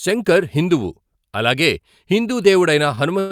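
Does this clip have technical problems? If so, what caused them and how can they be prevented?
Yes. Around 2.95 to 2.99 s the speech briefly hangs on one sound, drawn out for about 19 ms before it carries on without skipping anything. This is a short stall from a late packet. A packet missed its playout moment, the jitter buffer emptied, and the receiver stretched the last sound until the packet turned up, adding 19 ms of delay. A slightly deeper adaptive jitter buffer would absorb a delay of this size.

From 3.19 s to the end of the clip at 3.31 s, the sound freezes into a fading continuation of the last sound, about 108 ms long, that never drops to silence. This is a call audio freeze, likely caused by packets held up in transit, so the jitter buffer drained and the receiver kept extending the last sound while it waited. Nothing is lost, but playback falls 108 ms behind. Prioritising voice traffic with QoS and giving the jitter buffer more headroom would prevent it.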